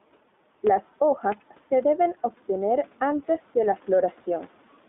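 Speech runs through the whole clip with gain pumping with a gain swing of around 5 dB, likely from excessive gain feeding a fast limiter that pulls it down on each loud syllable, so the waveform envelope looks flattened. The iLBC codec also affects every part of it, confining energy to roughly 200 Hz to 3.6 kHz with a hard spectrogram ceiling and a plainly audible rough, synthetic texture from 20 ms frames, which fits its 15.2 kbps mode. The room noise, about 39 dB below the speech, is part of the recording.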